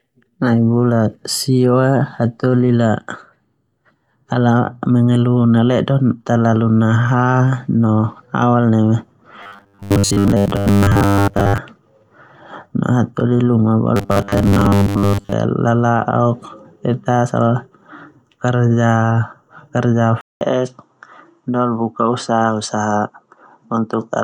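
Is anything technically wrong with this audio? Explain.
Yes. The speech has robotic sound from repeated short buffers, and later an input switch to a poorer device.

The robotic sound runs from 9.43 to 11.58 s, and again from 13.96 to 15.33 s, just before "lala'ok te". Audio likely arrived too seldom, so a short stretch was looped. A 100 Hz buzz fits a 10 ms buffer. Most of the real sound is lost. The voice turns metallic and rigid.

At 20.21 s the input switches to a poorer device, likely a different microphone or headset. There is a 200 ms silence. The tone dulls, the level drops a few dB, and faint new noise appears.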